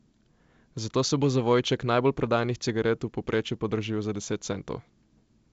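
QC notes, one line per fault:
Nothing stood out on listening to this speech.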